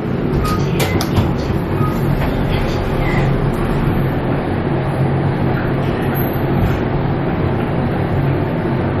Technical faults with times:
0.00-9.00 MP3 compression

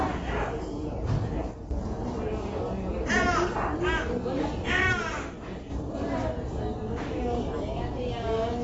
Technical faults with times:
0.00-8.64 AAC compression
1.51-1.71 one channel drops out
4.93-5.70 one channel drops out

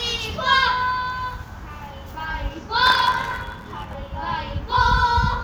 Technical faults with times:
2.85-3.95 block size mismatch (truncated)

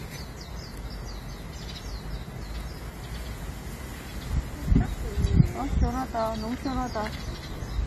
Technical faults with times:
0.00-7.87 AAC compression

